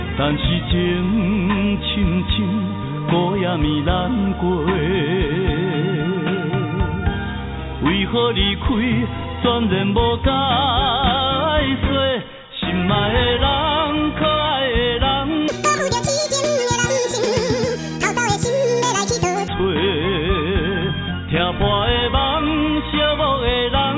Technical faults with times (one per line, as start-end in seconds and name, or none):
15.48-19.48 wrong sample rate